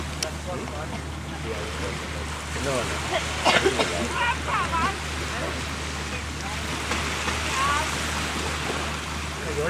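No technical fault can be heard anywhere in the audio. Nothing in the sound points to a problem in how it was captured, processed or passed along.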